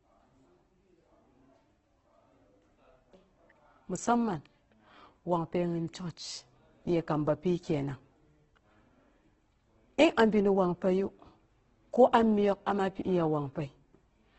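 Throughout the speech, the sound is rough, grainy and noisy, with nothing above 8.2 kHz. The likely cause is heavy Opus compression in its music mode. Bands are filled with noise as bits run short, which fits a rate near 12 kbps.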